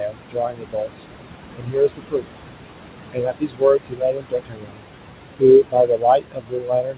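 A noise suppressor is cutting what it takes for steady noise by about 21 dB throughout this speech clip, so the room noise, which sits only about 9 dB below the voice, drops away in the gaps and surges back under the speech, leaving noise suppressor artifacts. The same processing also produces speech cut by the noise suppressor, treating parts of the voice as noise and pulling them down by about 22 to 23 dB from 0.0 to 1.05 s, 1.54 to 2.28 s, 3.13 to 4.84 s and 5.63 s to the end, so soft consonants and word endings there sound swallowed or faint. Nothing above 4 kHz comes through, which points to a narrowband call codec such as G.711.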